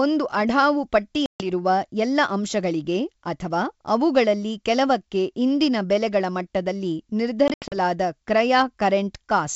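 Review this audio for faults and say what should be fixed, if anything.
Packet loss on an ADPCM call occurs at 1.26–1.49 s (about 140 ms lost) and 7.48–7.75 s (140 ms in scattered gaps, longest 80 ms). Silence fills the gaps, showing as hard-edged blank columns on a spectrogram and flat stretches in the waveform. The decoder's predictor and step size then drift from the sender's, so speech returns with a click or distortion. Packet-loss concealment with decoder-state resynchronisation would prevent this.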